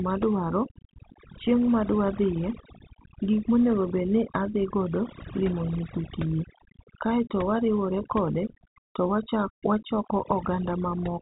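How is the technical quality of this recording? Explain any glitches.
The main problem is overdone noise removal, and it runs through the whole recording. The denoiser was set too aggressively, so any frequency band that came close to its idea of the noise got pushed way down or switched off entirely. That took the background noise and also the quieter parts of the speech. The gaps now sit in near silence with little twinkly specks. The telephone-band limit, with nothing above about 3.8 kHz, is just the G.711 line doing its normal job.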